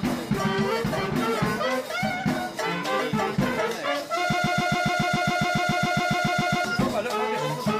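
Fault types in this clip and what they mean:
broken-record loop: from 4.33 to 6.65 s, one 0.14 s fragment repeats exactly, back to back, 17 times. The player, encoder or stream likely stalled and kept resending the last piece it held, so the audio due in that span is lost.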